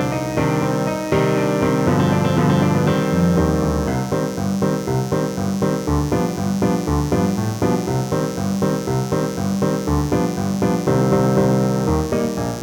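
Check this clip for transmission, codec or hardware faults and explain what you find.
One hardware fault: mains buzz runs through the whole clip. Switching spikes on a 60 Hz supply leak in, giving a raspy buzz roughly 20 dB below the signal; a spectrogram shows evenly spaced horizontal harmonic lines reaching several kHz.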